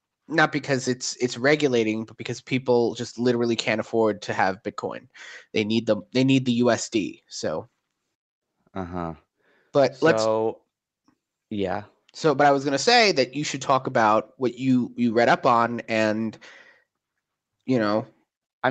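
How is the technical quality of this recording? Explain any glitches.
No glitches can be heard in this speech recording. It has the narrower sound of a call line, with nothing above about 8 kHz, which fits a wideband setting of the call codec.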